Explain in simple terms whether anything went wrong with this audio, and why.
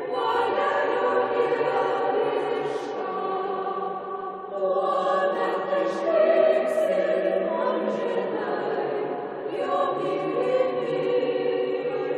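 Nothing went wrong here.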